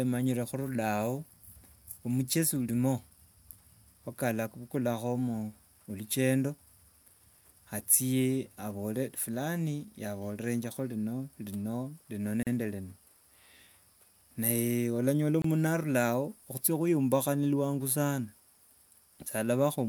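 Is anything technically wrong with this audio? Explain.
Yes. There is a gap at a join of encoded pieces at 12.43 to 12.47 s, about 38 ms long, and at 15.42 to 15.44 s, about 25 ms. Separately encoded segments were spliced with their encoder delay and end padding left in, so the speech drops briefly to silence with smeared edges and resumes where it stopped.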